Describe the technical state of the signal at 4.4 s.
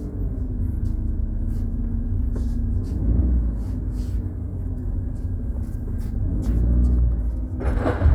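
At 4.4 s the signal is intact, with no audible dropout, distortion or other technical fault at that moment.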